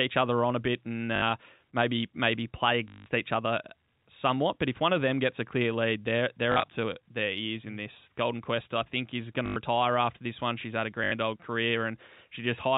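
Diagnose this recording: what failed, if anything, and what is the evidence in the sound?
The network stage failed, with packet loss and the last packet repeated. Short robotic stutters occur at 1.16–1.22 s, 2.88–3.06 s, 6.52–6.68 s, 9.46–9.56 s and 11.04–11.12 s. The longest, 180 ms at 2.88 s, buzzes at 50 Hz, which fits 20 ms packets. The loss between "a clear lead they're" and "to their ears in" is scattered. Others follow "I think is going" and "had a". The receiver replays the last packet until new ones arrive.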